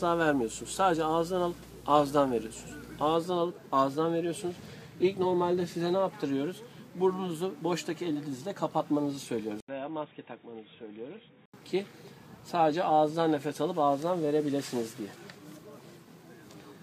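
From 0.00 to 3.15 s there is video or display buzz: a screen or video cable is coupling into the audio path. The buzz sits at 59.94 Hz, the picture's field rate, with hash layered over it and a thin whine at 15.7 kHz from the line rate, all around 20 dB below the signal. The 59.94 Hz fundamental and the high line tone set it apart from ordinary mains hum, which would sit at exactly 50 or 60 Hz with no tone near 15.7 kHz.

At 9.60 s the audio drops out for 80 ms and then returns duller and quieter, roughly 10 dB down, with nothing above 3.8 kHz and a new background noise about 30 dB below the signal. At 11.54 s it clears up again. The likely cause is the input being switched to a poorer device mid-recording. A plain low-pass filter or EQ change would not bring that gap at the switch, the level step or a different noise floor.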